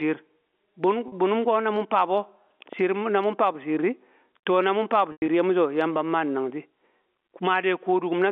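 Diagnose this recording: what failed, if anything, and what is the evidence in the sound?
Gain pumping runs through the whole speech clip. The gain swings by around 10 dB as each loud syllable arrives, and the speech itself sounds flattened in level. The likely cause is input gain set far too high at the analogue front end, with a fast limiter in the call processing clamping every peak. A noise gate would instead drop the gaps toward silence.

Packet loss with pitch repetition sits in the network stage. At 1.08 s a 40 ms gap, which fits two lost 20 ms packets, is bridged by a short, slightly held buzz. The second loss, just after "na mun faa bu", spans 5.12 to 5.28 s. About 120 ms is lost, scattered across 160 ms with one 100 ms run. There the repeated pitch period fades toward silence before "di ye mu so" cross-fades back in. A plain dropout would give an abrupt hole or click, not a sustained, decaying tone. 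The G.711 telephone band of about 250 Hz to 3.5 kHz frames both faults.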